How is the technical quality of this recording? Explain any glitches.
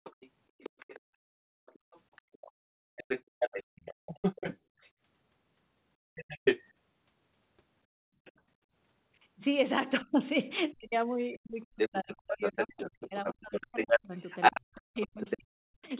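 The recording has clear echo-canceller trouble from a speakerphone call, heard through the narrow telephone band of G.711 coding, with nothing above 4 kHz.

Other side's voice leaking through, at 0.04–4.91 s, 6.15–6.63 s, 8.25–8.41 s and from 10.72 s to the end. A second voice is audible, likely loudspeaker playback the echo canceller failed to remove. It is slightly quieter than the talker at first, slightly louder at 6.15 s, faint at 8.25 s, and then roughly equal in level.

Background gated by the echo canceller, at 1.0–4.79 s, 5.97–6.15 s and 7.86–8.7 s. The canceller clamps the microphone while the loudspeaker plays, so the room sound drops by about 33–34 dB and then returns.

Speech suppressed in double talk, from 10.03 s to the end. With both sides likely talking at once, the talker's voice dips, at worst by roughly 40 dB, or cuts out in pieces.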